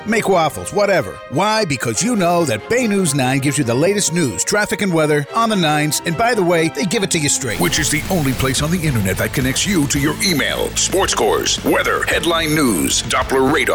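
From 7.50 to 8.53 s the sound becomes distorted for about a second, and any quieter moments in that stretch fill with noise instead of falling silent. This is a stuck bit, likely from a faulty data line or converter holding one bit fixed at 0 or 1, so roughly half the sample values are pushed off by that bit's weight in a pattern that follows the waveform.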